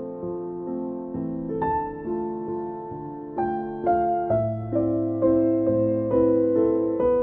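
No technical faults are audible.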